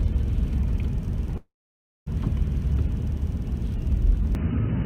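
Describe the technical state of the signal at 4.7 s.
At 4.7 s the recording is likely on a poorer input device, after the input switched at 4.35 s and stayed there to the end. With nothing passing above about 3 kHz, the sound turns dull and boxy without any gap or level jump, and a new noise floor sits roughly 35 dB down.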